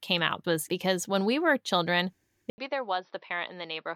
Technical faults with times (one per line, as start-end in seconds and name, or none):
2.50-3.96 input switched to a poorer device